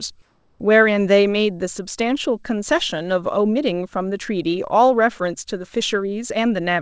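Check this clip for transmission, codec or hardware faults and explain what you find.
One transmission fault stands out, near the start of the speech clip. From 0.22 to 0.60 s, about 380 ms, the background is replaced by comfort noise. The likely cause is discontinuous transmission: the sender judged this stretch free of speech and stopped sending audio, and the receiver filled the gap with synthetic noise matched only roughly to the real background, which sits about 35 dB below the loudest speech. The room's natural texture gives way to a flat, featureless hiss, about 1 dB quieter, until the sound resumes. The audio has no content above 8 kHz, consistent with a G.722 call codec.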